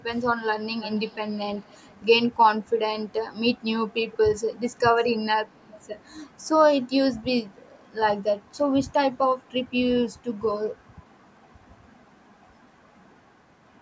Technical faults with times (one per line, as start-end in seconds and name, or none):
0.17-0.22 echo leak
0.80-1.99 echo leak